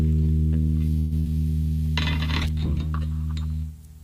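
A call audio freeze at 0.99 to 1.13 s in this everyday-sound recording stretches the last sound into a fading buzz or hiss for about 116 ms, likely from packets held up until the jitter buffer ran dry. The sound then resumes where it stopped, late but intact. A burst of packet loss at 1.19 to 1.27 s follows, where a decaying continuation of about 63 ms covers roughly 60 ms of sound that never arrived, so the sound picks up further on.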